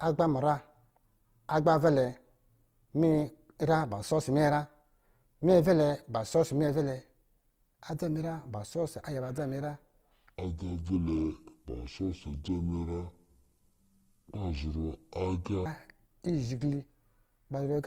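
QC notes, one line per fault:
throughout: Opus compression, grainy, rough speech texture with bands noise-filled rather than emptied, likely from CELT-mode coding at a low rate fitting 24 kbps.
10.36–15.66 s: section at the wrong speed, playing at 0.572 times speed, so speech drags and drops about ten semitones, likely from a clock mismatch.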